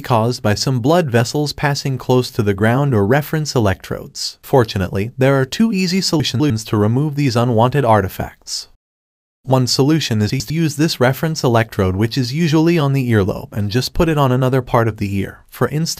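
Chunks out of order at 6.2 to 6.5 s and 10.3 to 10.5 s: a 100 ms chunk plays two, then one, positions late, so the audio jumbles briefly.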